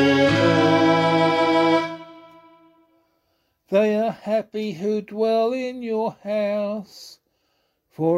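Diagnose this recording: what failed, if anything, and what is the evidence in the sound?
Nothing in the recording points to a failure at any stage of the chain. There is no event in the sound that calls for a diagnosis.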